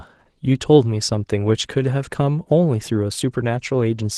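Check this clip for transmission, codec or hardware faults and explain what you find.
One codec fault runs through the whole speech clip: Opus voice compression, with SILK coding the band below 8 kHz and a thin CELT layer above it. The damage is plainly audible, hoarse and slightly robotic, and fits a rate near 16 kbps. A spectrogram would show smeared, patchy content above 8 kHz.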